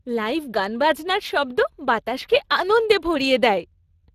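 Throughout the speech, the Speex codec forces the signal through a CELP model with too few bits for the excitation, at a rate that fits roughly 22 kbps. The damage is plainly audible: the speech turns noisy and hoarse, and nothing remains above 15.3 kHz.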